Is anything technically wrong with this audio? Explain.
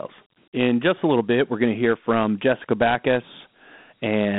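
Yes, the whole clip carries Dialogic VOX ADPCM coding. Each sample is squeezed into a 4-bit step guess, consistent with a 32 kbps stream, so a gritty hiss rides along with the speech. The band runs from about 150 Hz to 3.6 kHz, with nothing above 3.9 kHz.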